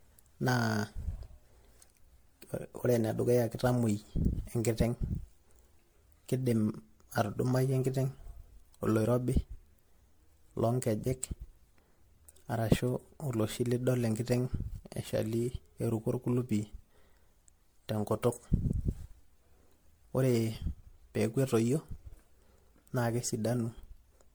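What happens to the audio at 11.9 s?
Generation loss is the likely cause: the speech seems to have passed through an MP3 codec at around 96 kbit/s roughly seven times, each pass requantising on a shifted frame grid. At 11.9 s, as throughout the clip, that piled-up damage sounds swirly, hollow and smeared, with blurred attacks.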